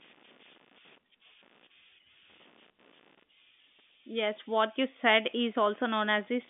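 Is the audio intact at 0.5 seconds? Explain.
No. Computer activity noise runs through the whole clip, including 0.5 s. Processor or peripheral load changes are disturbing the audio circuit's shared ground, adding a buzzy chirping that pulses around 70 times a second, roughly 30 dB below the speech.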